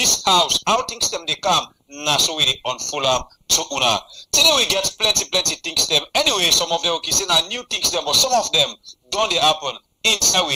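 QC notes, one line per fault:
Throughout, sample clock jitter: the converter's clock wanders by around a microsecond, so each sample lands slightly early or late at random. That timing error becomes a level error in proportion to how steeply the waveform is moving, so a fine hiss or grain rides on the audio, roughly 35 dB below it. It grows on loud, bright passages and falls away entirely when the sound stops.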